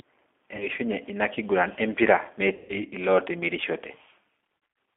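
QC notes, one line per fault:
Throughout: G.729 codec, plainly audible; the line is confined to roughly 250 Hz to 3.6 kHz, with the rough, synthetic texture of an 8 kbit/s pulse-coded model.
0.56 to 0.68 s: VoIP packet loss concealed by the speech codec; about 40 ms of audio missing, patched by extrapolating the last pitch and filter, leaving a brief stretched tone or coloured noise.
2.55 to 2.82 s: VoIP packet loss concealed by the speech codec; a longer 140 ms gap stretched into a fading tone or coloured noise, with the speech weak or distorted for a while after recovery.
4.58 to 4.76 s: VoIP packet loss concealed by the speech codec; 120 ms lost in short bursts of up to 40 ms across 180 ms, giving repeated concealed patches.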